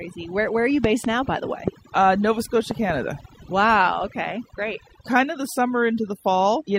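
Overdone noise removal runs through the whole speech clip. The reduction is set so hard that frequency bands near the noise floor are pulled almost to nothing, taking quiet parts of the voice with them. The background becomes near silence dotted with twinkling specks. Ordinary band-limiting would dull the sound evenly rather than flicker like this.

Loud pops come as a pair between 0.84 and 1.07 s, singly at 1.68 to 1.70 s, and as another pair from 2.71 to 2.92 s. They peak around 15 dB above the speech, with the last pair nearer 10 dB. They are likely voltage steps from a plug, switch or static discharge. The speech carries on beneath each sharp thump, which marks them out from dropouts or clipping.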